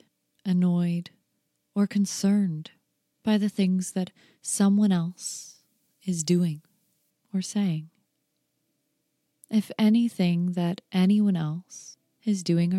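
From 5.10 to 7.10 s, pre-emphasis is left on: the treble lift fitting the CD 50/15 µs curve goes uncorrected, leaving about 8 dB extra at 10 kHz over 1 kHz. The sound turns thin, bright and sibilant, with a gentle shelf that levels off rather than a steadily rising treble boost.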